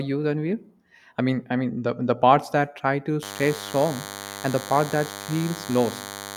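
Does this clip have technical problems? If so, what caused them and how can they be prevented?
Yes: DECT cordless phone buzz from 3.23 s to the end, a thin 100 Hz buzz with many harmonics, about 15 dB below the speech. The mechanism is radio bursts from a nearby DECT handset or base arriving every 10 ms and being rectified by the audio circuitry. Its gated, rasping edge distinguishes it from the smoother tone of mains hum. To prevent it, keep DECT phones and bases well away from microphones, cables and interfaces.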